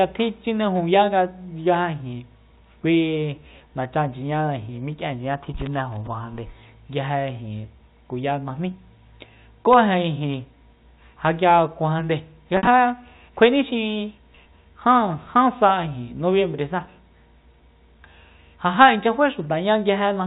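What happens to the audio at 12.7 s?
Packet loss with pitch repetition hits the speech from 12.57 to 12.67 s. About 80 ms of audio goes missing, scattered across those 100 ms, which fits roughly eight short packets. The receiver fills each hole by replaying the last pitch period and fading it out over about 50 ms. The brief gaps sound like a held, buzzy tone. The longest gap, 60 ms, outlasts the fade and dips toward silence before the speech cross-fades back in.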